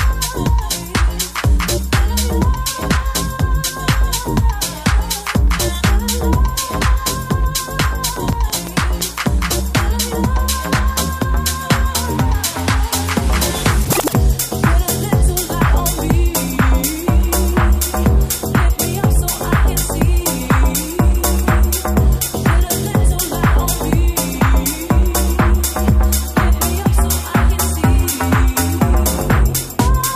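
From 8.16 to 9.02 s, a train of clicks ticks over the sound. About seven regular pulses arrive at 5.92 per second, a few dB above the audio. Interference or a faulty connection or supply is the likely cause.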